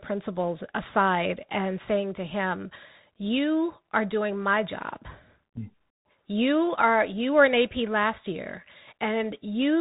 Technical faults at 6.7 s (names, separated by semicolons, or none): Bluetooth CVSD headset codec